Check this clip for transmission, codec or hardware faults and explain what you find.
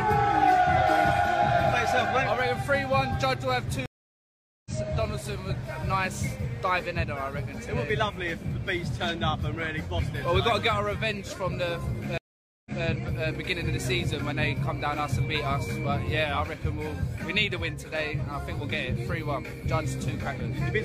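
Two stream reconnects interrupt the clip. At 3.86 s the audio drops out for about 0.8 s and returns at 4.71 s roughly half a second further on, material skipped as a live feed moves ahead. At 12.18 s a 481 ms gap ends at 12.84 s with playback 186 ms earlier, so a short stretch repeats as the server resends buffered audio. Each time the connection fails, the player falls silent, then restarts its decoder mid-stream, fading in the first frame. A waveform shows flat silent blocks with a soft ramp back up; a spectrogram shows blank vertical bands and discontinuous content on either side.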